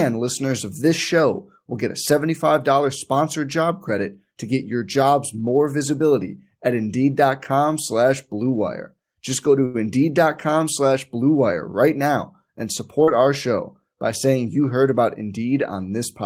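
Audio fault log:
9.65 to 9.76 s, short stall from a late packet: right after "go to" a packet showed up late and the jitter buffer ran dry, so the last bit of speech gets held for about 87 ms and then carries on where it left off. Nothing's lost, you just hear a slightly stretched, faintly buzzy hang, and everything after sits 87 ms later.
13.04 to 13.09 s, short concealed packet loss: between "right now and" and "our show by saying" about 40 ms of audio never made it, and the receiver papered over the gap by extending the last sound for roughly 32 ms before blending back in. It comes across as a quick smear or wobble.
14.93 to 15.38 s, jitter buffer speed-up: just after "by saying you heard" the buffer was holding more than it wanted, so the receiver snipped out short pitch-period chunks, around a twentieth of a second in all. Speech runs at about 108% speed with the pitch unchanged, so it sounds a touch rushed.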